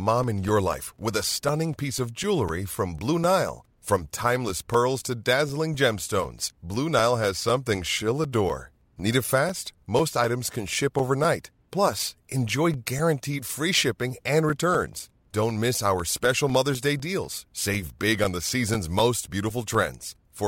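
Speech, with a steady ticking that rides on the signal from about 0.23 s to 20.25 s, one small click every 0.25 s, or four per second, roughly seventy in all, audible only where there is sound beneath it. These are periodic USB or driver dropouts: something stalls the USB bus or audio driver on a fixed schedule, and each stall drops a few milliseconds of audio and leaves silence in the gap, so the waveform breaks abruptly.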